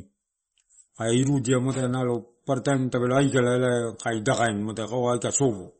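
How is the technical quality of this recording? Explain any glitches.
The speech is plainly degraded throughout. It sounds watery and swirly, with nothing above 8.4 kHz, so sibilants are dull and chirpy. That points to likely MP3 compression at a low bitrate, roughly 34 kbps, where the encoder cuts the treble and lets weak frequency lines flicker between frames.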